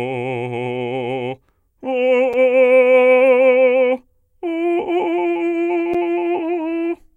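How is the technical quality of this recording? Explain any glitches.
The music has two brief dropouts, both of the kind called a block of digital silence, at 2.33 s and 5.94 s. Each time, a run of samples was set to zero, lasting 5.8 ms and 8.7 ms. The first fits a 256-sample buffer that the audio process didn't fill in time. Because the signal drops straight to zero and back with no fade, and each gap is so short, each is heard as a tick or dip rather than silence. Unlike a fade-based dropout, there is no ramp.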